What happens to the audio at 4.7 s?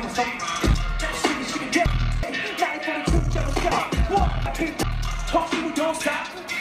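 At 4.7 s you're inside a stretch of chunks out of order, running from about 3.72 to 4.83 s. One chunk of roughly 0.37 s got delivered two chunks late, so it plays after the two that should have followed it. Nothing's actually missing, just reshuffled, so the sound jumps backward and forward in time, with three abrupt joins. The net effect is a short, jumbled, garbled moment rather than a dropout.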